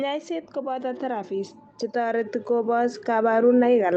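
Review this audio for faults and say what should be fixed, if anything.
Automatic gain rising, from 0.62 s to the end of the clip: the gain control judged the input too quiet and kept turning itself up, so the speech and the background noise swell together over more than three seconds, heard through a call codec whose top end stops near 8 kHz.

To prevent it, set the microphone input level correctly before the call, or slow down or cap the automatic gain control so it cannot keep climbing.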